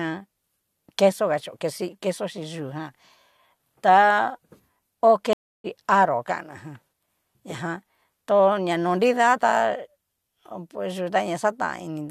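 A stream reconnect runs from 5.33 to 5.66 s: the connection dropped, the speech cuts to about 0.31 s of silence, and playback resumes from a fresh decoder roughly 0.3 s further along, so a short stretch of speech is skipped entirely.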